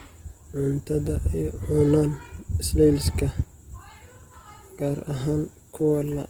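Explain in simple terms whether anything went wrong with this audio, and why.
Throughout the speech, a rough, grainy texture replaces the swirly, watery sound of MP3; this is likely Opus compression, filling missing detail with noise.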